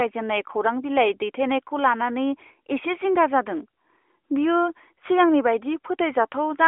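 No technical faults can be heard anywhere in the speech. The AMR narrowband mobile codec path gives it a phone-line band of roughly 300 Hz to 3.4 kHz, with nothing above about 3.5 kHz and only a light coded texture, which fits the codec's 12.2 kbps mode.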